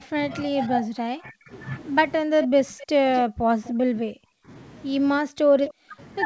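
From 0.0 to 1.52 s, 2.25 to 4.49 s and 5.21 to 5.99 s the speech is suppressed in double talk, likely because an echo canceller mistook this side's speech, overlapping far-end sound, for echo. The voice dips by up to about 40 dB or drops out in pieces. The waveform shows collapsed envelopes, and the spectrogram shows gapped, thinned bands.

Inside these stretches, echo leak appears at 2.42 to 2.47 s, 2.79 to 3.19 s, 3.65 to 3.7 s and 5.66 to 5.73 s. It is a copy of the voice trailing by 256 ms, at about -10, -15, -25 and -15 dB, likely residual loudspeaker pickup. On the spectrogram it shows as faint, shifted duplicates of the harmonic patterns.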